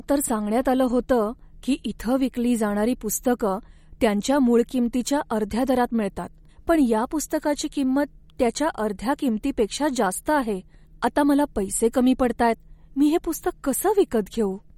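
From start to finish the speech carries plainly audible codec damage, most likely MP3 compression at a low rate, which fits a bitrate around 48 kbps. Short of bits, the encoder drops weak frequency lines that flicker on and off between frames, giving a watery, swirling texture, while nothing remains above 18.5 kHz. Unlike a simple low-pass filter, which only dulls the top, this damage moves and warbles within the audible band itself.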